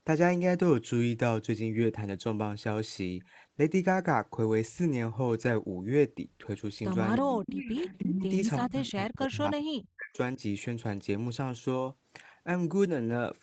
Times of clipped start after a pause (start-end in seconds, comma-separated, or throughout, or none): none